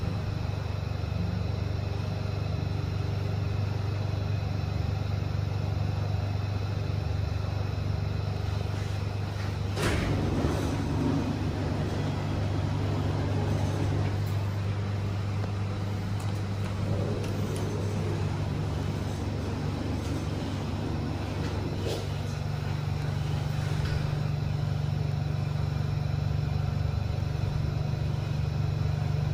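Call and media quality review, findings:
Clock drift buffer slips: regular click/pop about every 2.09 s, roughly 15 events from 2.08 s to 29.29 s. Likely cause: two devices on independent clocks, off by a few hundred ppm, so the buffer between them periodically drops or repeats a few tens of samples. Spectrogram: thin broadband vertical lines at even spacing. Waveform: step discontinuities at each slip.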